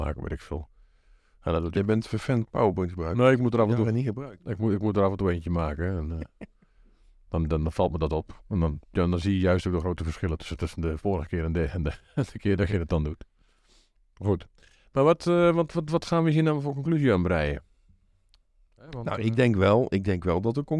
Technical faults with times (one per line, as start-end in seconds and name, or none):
none